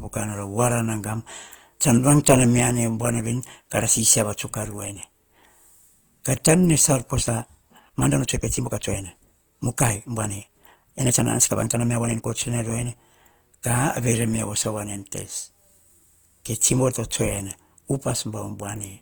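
A speech recording, likely passed through Opus compression in its music mode at a rate around 24 kbps, so the voice turns grainy and rough while the band still reaches 20.1 kHz. From 7.13 to 12.27 s a time-stretched section, likely sped up 1.45 times with pitch held, makes that stretch rushed at unchanged pitch.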